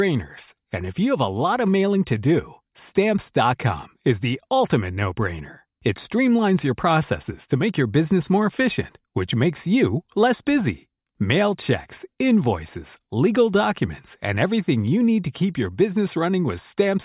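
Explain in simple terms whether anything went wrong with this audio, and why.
Nothing went wrong with the recording: the speech signal runs steadily, with no breaks, level jumps or added disturbances anywhere along its course.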